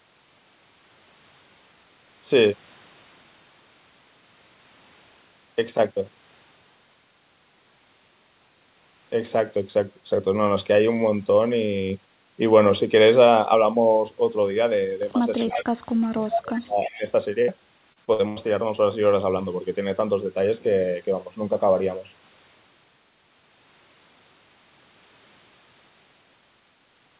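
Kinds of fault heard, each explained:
Echo leak: A delayed copy of the speech, 343 ms late, likely from a far-end loudspeaker whose echo canceller let some through. Brief scraps at 15.39 to 15.55 s (about 15 dB down) and 16.34 to 16.40 s (about 5 dB down). The copy is distinct and separate, unlike the smooth decay of room reverb.
Speech suppressed in double talk: From 15.44 to 17.02 s the voice repeatedly dips, thins and drops out in pieces, roughly 30 dB at its deepest over about one and a half seconds, likely because an echo canceller ducked the talker during simultaneous speech. Pieces fade away rather than freezing into a held tone.
Burst of packet loss: A single hole at 17.42 s. The last sound is stretched for 55 ms into a held buzz or fading hiss, then speech resumes with 60 ms skipped. It is one isolated gap, not a run of them, so there is no robotic quality.
Repeated packet loss (robotic sound): From 17.93 to 18.46 s five gaps follow in quick succession, the longest 84 ms. 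About 205 ms of patched sound stands in for 210 ms lost, 38% of the stretch. The rapid recurrence gives a choppy texture with pieces missing that a single burst lacks.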